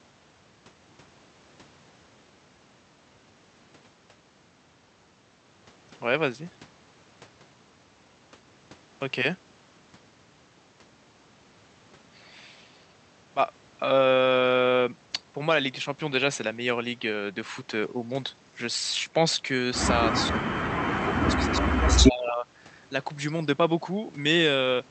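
Speech suppressed in double talk, from 20.3 to 20.59 s and again from 20.92 to 22.46 s: the talker's level drops sharply, by roughly 25 dB at its deepest, and the speech thins and breaks up, most likely because an echo canceller, unable to separate it from loudspeaker echo, turned it down.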